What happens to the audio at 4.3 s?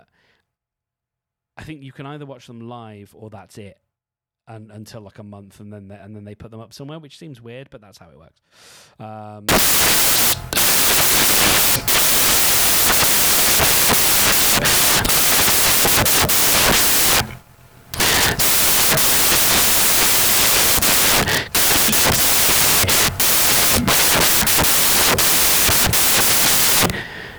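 Nothing goes wrong at 4.3 s; the speech there plays through intact, with no dropout, click or distortion at that point.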